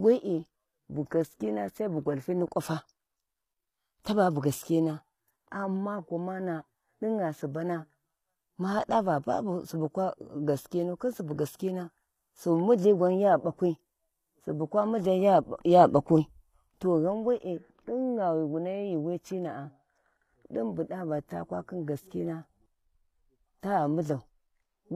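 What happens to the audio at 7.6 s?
At 7.6 s the speech carries the same damage heard across the whole clip: likely HE-AAC compression, at a low bitrate consistent with roughly 24 kbps. Sibilants sound gritty and metallic, and nothing reaches above about 14.9 kHz. The upper band is rebuilt by copying lower bands upward, so its harmonics don't line up across the crossover. Unlike a plain low-bitrate codec that dulls the treble, this keeps the top bright but synthetic and lispy.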